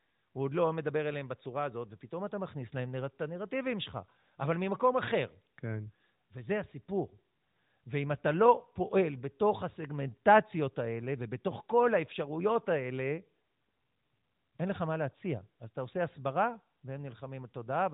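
No technical faults can be heard anywhere in this speech recording.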